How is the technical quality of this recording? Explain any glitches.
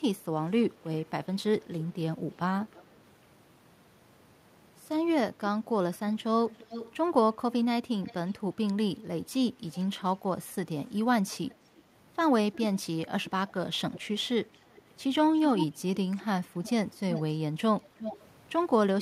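The speech carries a recurring echo leak, a delayed second copy of the talker. It appears at 1.74–2.97 s, 6.5–6.93 s, 8.05–8.33 s, 9.73–9.84 s, 11.49–11.54 s and across 12.53–18.23 s. The lag grows slightly, from 339 to 362 ms. The likely cause is a loudspeaker on the far end whose echo canceller let residue back. Most scraps sit faint, about 25–30 dB down. The 6.5 s scrap and the long final stretch are stronger, about 10 dB down. On a spectrogram, the speech harmonics reappear as a fainter, shifted copy. The waveform shows a smaller trailing envelope after syllables within these spans.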